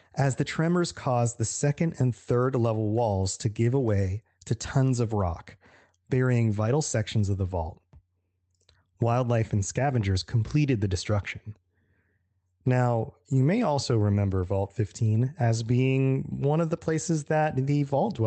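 No technical faults can be heard anywhere in this recording.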